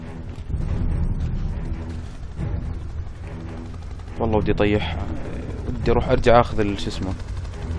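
No technical faults can be heard anywhere in this clip.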